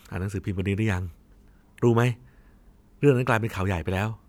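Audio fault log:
No fault is heard anywhere in the speech; the signal stays steady and unbroken from its first moment to its last.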